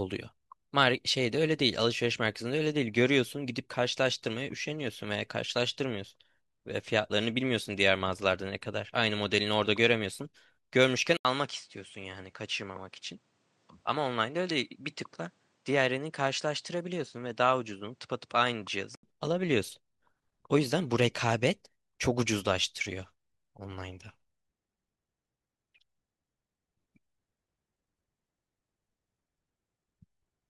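At 11.17 s a silence of 80 ms precedes a narrowed, slightly duller, somewhat quieter sound with a faint new noise floor, likely an input switched to a poorer device. A spectrogram shows empty bands above 9.8 kHz until 19.03 s, and the waveform shows a gap.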